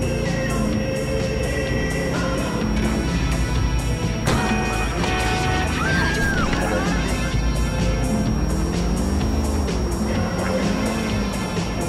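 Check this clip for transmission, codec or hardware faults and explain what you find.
There's one hardware fault here, running for the whole clip: a switching supply whistle. A thin, high tone sits under everything, wandering slightly between about 5.57 and 5.64 kHz, roughly 20 dB below the signal. That's a switching power supply either dropping into an audible burst mode or beating against another supply nearby, with the frequency drifting as the load shifts. It comes across as a steady, slightly unsteady whine.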